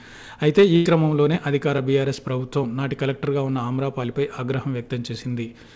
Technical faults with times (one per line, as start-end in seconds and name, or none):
0.76-0.87 burst of packet loss